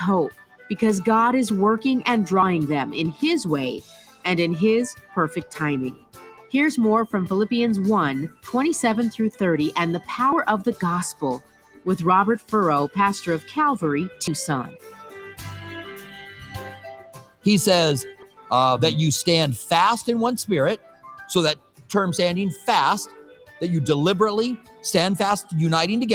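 The sound pumps and thins throughout, with held material swelling and sinking by around 10 dB while attacks come through. This is a speech noise suppressor left on, mistaking sustained tones, ambience and tails for noise. Sound cut by the noise suppressor is clearest at 0.31–0.76 s, 3.14–6.54 s, 8.29–9.41 s, 11.13–18.51 s, 20.77–23.61 s and 24.58–25.52 s, where fading and steady parts drop by about 11 to 18 dB and decays are cut short. Separately, brief skips occur at 2.43, 6.38, 10.33, 14.28, 18.23 and 22.18 s, each removing a short fragment with the two sides butted together. Their regular spacing of roughly 4 s points to audio missing between chunks, likely from a recorder or processor dropping a small piece each time it hands over from one block to the next.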